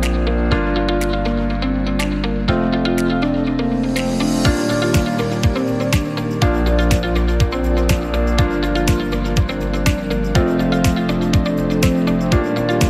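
No technical faults are audible anywhere in the clip, so there is nothing to time or attribute to a cause.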